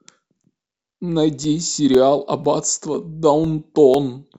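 From 0.44 s to 3.95 s the speech carries periodic USB or driver dropouts: every 0.5 s a couple of milliseconds go silent, giving regular ticks. Their strict, metronome-like spacing, audible only while sound is present, separates them from random clicks or network packet loss.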